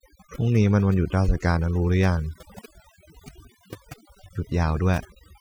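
Throughout, the speech sits over near-silent, twinkling gaps: overdone noise removal, with narrow frequency bands cut whenever they sat close to the estimated noise.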